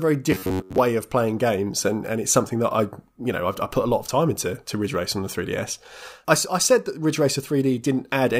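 From 0.32 to 0.78 s the sound collapses into a rigid, metallic buzz near 93.8 Hz, robotic sound from repeated short buffers. The likely cause is audio arriving too slowly, so a roughly 10.7 ms chunk is looped in place of most of the real signal, imposing that fixed pitch. On a waveform the stretch shows identical cycles repeating every 10.7 ms; a spectrogram shows evenly spaced horizontal harmonics at multiples of 93.8 Hz.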